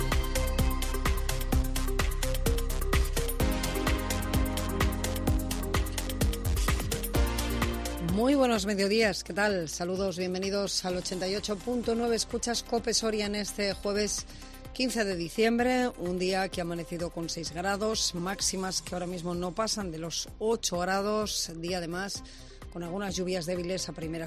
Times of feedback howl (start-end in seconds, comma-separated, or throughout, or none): none